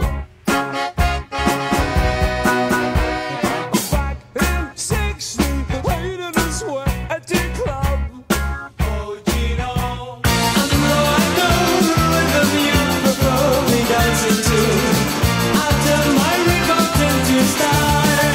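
From 1.4 to 3.0 s the audio plays twice, an equally loud, dry copy trailing roughly a third of a second behind, a doubled audio track likely from a second, slower capture path.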